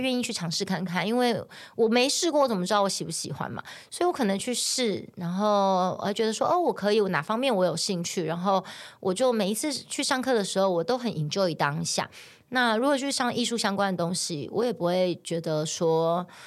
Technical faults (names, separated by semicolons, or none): none